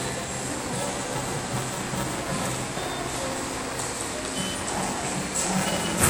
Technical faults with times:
0.00-6.10 buffer tearing

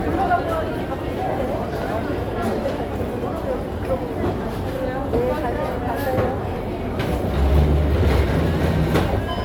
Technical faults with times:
0.00-9.44 generation loss

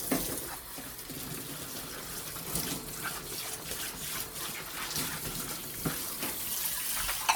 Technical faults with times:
0.00-7.35 generation loss

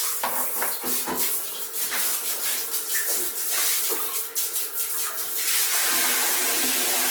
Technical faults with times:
0.00-7.11 Opus compression

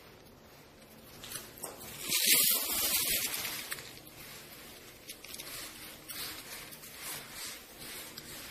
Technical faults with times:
0.00-8.51 MP3 compression

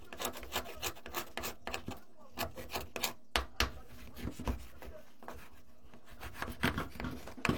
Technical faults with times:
0.00-7.57 DC offset

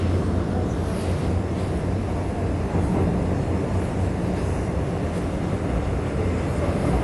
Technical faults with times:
0.00-7.03 AAC compression

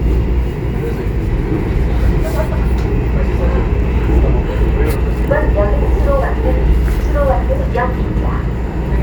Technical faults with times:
none

